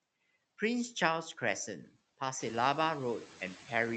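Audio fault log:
Throughout: noise suppressor artifacts. The suppressor drags the background down by about 17 dB in the gaps, then lets it swell back under the speech. The room noise steps up around 2.5 s.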